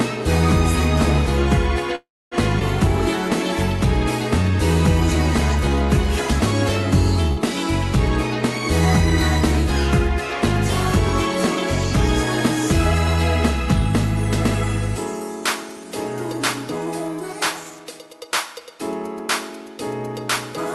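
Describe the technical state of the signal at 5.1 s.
A jitter buffer slow-down is under way from 4.43 to 5.87 s: the receiver repeated short periods to add 79 ms, so the sound runs at 95% speed, drawn out, at unchanged pitch.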